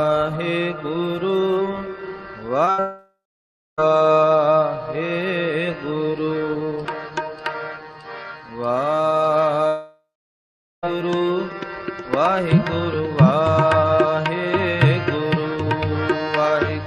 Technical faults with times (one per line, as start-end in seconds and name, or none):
2.65-2.69 short concealed packet loss
2.71-2.80 burst of packet loss
2.80-3.80 long network dropout
9.68-10.85 long network dropout